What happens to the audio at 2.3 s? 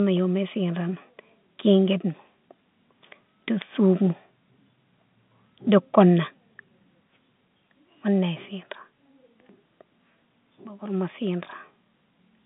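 Nothing goes wrong at 2.3 s: the speech there passes intact, carried in the narrow telephone-style band of the G.711 line with nothing heard above about 3.8 kHz.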